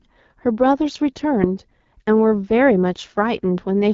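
Throughout, the speech carries AMR wideband (HD Voice) codec damage. It sounds rough and raspy, with nothing above 7.5 kHz. This fits a low 8.85 kbit/s rate.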